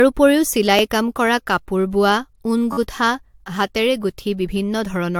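The speech appears to have likely gone through repeated lossy encoding, decoded and re-encoded several times, which points to AAC-LC at around 96 kbit/s. This is generation loss: each pass quantises the signal again on a shifted frame grid, so the errors pile up. Throughout the speech it sounds swirly and hollow, consonant attacks are smeared, and nothing is present above 19.1 kHz. Twice the playback device ran short of fresh audio and replayed its last buffer, a repeated buffer. Each repeated piece lasts about 11 ms, which fits a 512-sample buffer, and no audio is lost. At 0.79 s, just before "কাম কৰা কাপোৰ বোৱা", the piece plays once more and is heard as a single click. From 2.73 to 2.77 s, right after "কৰা কাপোৰ বোৱা ঊণ", it loops several times with hard joins, giving a brief buzzing stutter.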